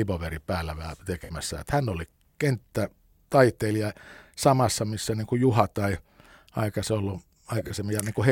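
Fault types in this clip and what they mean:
Corrupt frame concealed: the decoder detected bit errors in compressed AAC frames and covered them itself, so the speech has a brief concealed stretch from 1.24 to 1.31 s and a longer one from 7.58 to 7.71 s.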